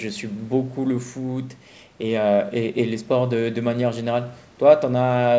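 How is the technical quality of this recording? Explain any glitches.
Nothing stood out on listening to this speech recording, which has the band-limited sound of a call path with no content above about 8 kHz.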